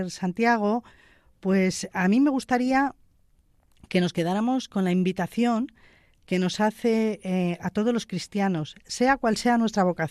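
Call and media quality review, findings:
No audible faults found in this speech clip. Nothing to escalate, no component flagged.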